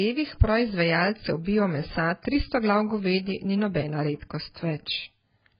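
A speech clip that was most likely squeezed through AAC compression at a very low rate, one that fits about 12 kbps. Nothing survives above 5 kHz, so the speech sounds dull and muffled throughout, with a smeared, fizzy texture where the coder has run out of bits. From 1.44 to 1.46 s there is pre-echo: an attack fell late in a transform block, and the noise sized for it spread back across the preceding quiet, leaving a 21 ms hiss just before "bio mesa tristo glav" and softening its onset.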